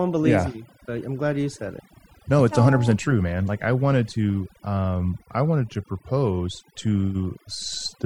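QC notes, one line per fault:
Throughout: overdone noise removal, where aggressive spectral gating cuts bands near the noise floor, leaving twinkling specks and a spectrogram background of scattered isolated dots.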